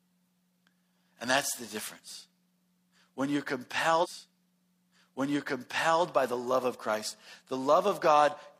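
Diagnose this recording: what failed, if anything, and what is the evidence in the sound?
A stream segment repeated at 4.00 s, a playback or streaming fault. From 4.00 to 5.99 s about 2.0 s of the speech plays a second time, with a small blip at the jump back, just before "by the love of". The player fetched or queued the same segment twice, adding about two seconds to the programme.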